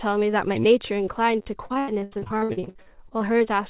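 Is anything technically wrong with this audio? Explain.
Yes, there are two faults in this speech clip.

From 1.42 to 1.46 s there is a repeated buffer. New audio arrived late, so the same 10.7 ms piece played four extra times. That fits a 256-sample buffer. It is heard as a brief buzzy stutter with hard joins. No audio is lost.

From 1.66 to 3.49 s there is repeated packet loss, heard as robotic sound. About twenty holes follow one another, the longest 82 ms. Each is patched by stretching the last sound, covering about 37 percent of the stretch. The speech turns choppy and robotic. The G.711 call path cuts everything above 4 kHz throughout.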